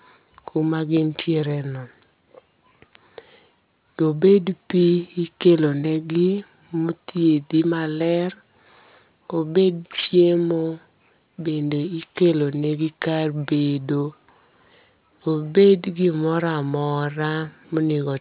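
Aliasing runs the whole way through this speech. It sounds like a drop to an 8 kHz rate with no filter first, so everything above 4 kHz folds back down as wrong pitches, roughly 20 dB under the voice, leaving the sibilants gritty and metallic.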